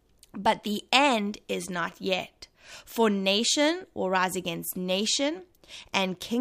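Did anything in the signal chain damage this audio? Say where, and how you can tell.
No, nothing along the chain seems to have harmed this speech recording, and there's nothing to point to at any stage.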